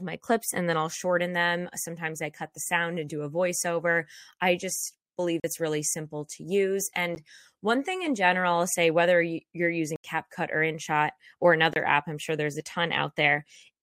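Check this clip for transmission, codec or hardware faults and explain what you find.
The speech has four blocks of digital silence. They fall at 5.40 to 5.44 s, after "voiceover I just believe"; at 7.15 s, after "really simple to use"; at 9.96 to 10.04 s; and at 11.73 to 11.76 s, before "app I'm sure there's". The sound cuts out abruptly to silence, likely because the output buffer was not filled in time. The 10 ms gap is a tick. The 40 ms and 80 ms gaps are audible holes.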